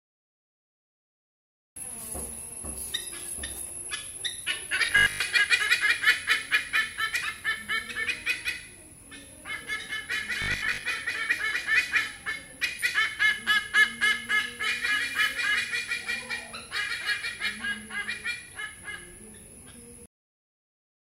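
From 4.86 to 5.20 s, and again from 10.42 to 10.84 s, the audio turns into a rigid, metallic 50 Hz buzz: robotic sound from repeated short buffers. The likely cause is audio arriving too seldom, so playback keeps looping the last short chunk instead of new material. A 50 Hz buzz points to 20 ms repeats, and most of each stretch is filled this way. Only the rough shape of the underlying sound carries through.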